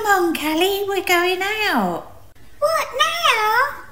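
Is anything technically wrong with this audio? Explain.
No, nothing stood out as technically wrong on listening to this audio.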